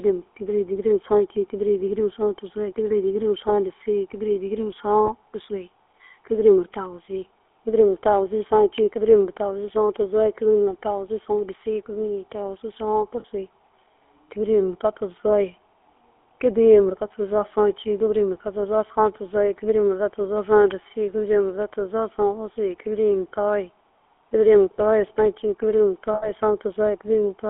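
Throughout, the GSM full-rate codec models the vocal tract with pulse excitation inside a 300 Hz to 3.4 kHz line, leaving plainly audible buzzy, gravelly roughness. Lost GSM frames at 5.06 s (20 ms), 13.2 s (40 ms) and 26.14 s (80 ms) were filled by repeating the last good frame, producing short rough, metallic rings, the longest near the end.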